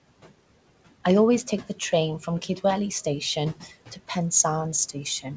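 Speech throughout, carrying noise suppressor artifacts for its whole length: the room noise, about 19 dB below the voice, is pulled down by roughly 18 dB in the gaps and swells back under each phrase. Unlike a noise gate, which switches hard between open and shut, the reduction works band by band and frame by frame. The band limit at 8 kHz comes from the call path.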